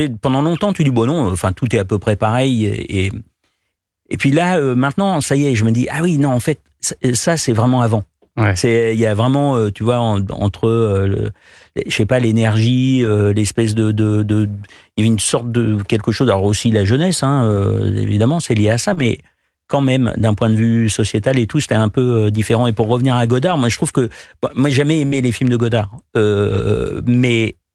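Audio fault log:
13.01–13.07 s, 17.51–17.57 s, 18.97–19.07 s, 21.29 s (after "d'un point de vue"), 23.47–23.53 s (after "pour revenir à"), 25.12–25.14 s (after "que moi j'ai jamais"), 26.50–26.60 s: lost packet rebuilt from error correction. Each time, one to three packets went missing, but the following packet carried a low-bitrate copy that the decoder played instead. About 20, 40 or 60 ms of speech turns rougher and noisier with no gap. On a spectrogram, each patch shows smeared, grainier harmonics, while the waveform stays continuous.
18.93–18.99 s: short concealed packet loss. About 40 ms of audio never arrived in time. The receiver filled 33 ms by extending the preceding sound and then blending back into the real signal, which gives a brief smear. It runs straight into the rebuilt stretch at 18.97 s. On a spectrogram, the spectrum goes flat and repeated, with no new detail.
25.07–25.14 s: burst of packet loss. 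Around 40 ms of audio is missing, and the receiver filled 51 ms by continuing the last sound and fading it down. This is heard as a held, dying buzz or hiss before the speech resumes, overlapping the rebuilt packet at 25.12 s. On a waveform, the envelope decays smoothly across the fill, and the spectrogram shows frozen, fading bands.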